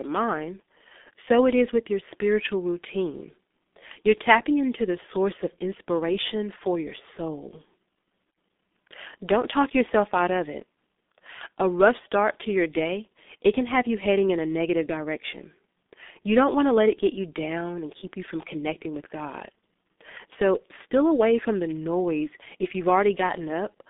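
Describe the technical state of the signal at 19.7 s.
At 19.7 s the speech is still passing through a G.723.1 codec, as it does for the whole clip. This low-rate telephony coder builds the signal from a coarse, slowly updated voice model in 30 ms frames, and the heavy damage fits a bitrate near 6.3 kbit/s. The line band runs from about 200 Hz to 3.6 kHz, with nothing above 3.7 kHz, so the speech sounds muffled and hoarse, with smeared consonants.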